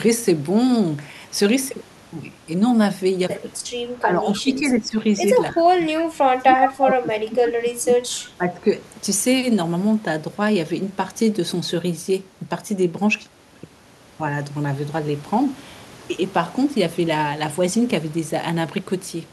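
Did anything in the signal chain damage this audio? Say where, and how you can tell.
Yes, in the call processing. Between 4.01 and 5.0 s, 5.51 and 6.61 s, 6.81 and 8.09 s, and 8.37 and 8.7 s the speech sinks and partly drops out, by around 10 dB in the first and last stretches and around 20 to 25 dB in the middle two. That is speech suppressed in double talk: the echo canceller was likely unable to tell this talker from the far-end loudspeaker echo while both sides spoke, so it attenuated everything.

Short delayed copies of the voice appear at 4.33–4.41 s, faint at roughly 25 dB below the speech, and at 6.61–6.69 s, about as loud as the speech itself. Each trails the original by 302 ms. This is echo leak, likely from a loudspeaker endpoint whose canceller left residual microphone pickup of the far-end audio, which was then sent back down the line as a brief echo.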